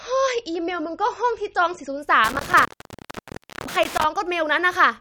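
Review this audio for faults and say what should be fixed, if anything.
From 0.0 to 2.0 s the speech has nothing above 8.3 kHz and heavier codec smearing. Then the quality jumps at once, with no gap, to a fuller sound. That points to an adaptive stream starting at a low bitrate, consistent with about 36 kbit/s MP3 stepping up to 128 kbit/s once the player had measured the connection. A sudden switch, rather than a gradual change, distinguishes it from a filter. Starting the player on a higher rung, or prebuffering, would prevent it.

Between 2.24 and 4.04 s an intermittent contact breaks the signal. The line is open for about 0.99 s in total, leaving faint hiss, with crackle at each break. The crackle and residual hiss set it apart from a clean digital dropout. Reseating or replacing the cable and connectors would fix it.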